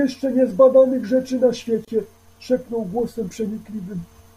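At 1.85 s, a gap at a join of encoded pieces: untrimmed encoder padding drops a 27 ms gap into the speech, showing as a blank stripe with smeared edges on the spectrogram.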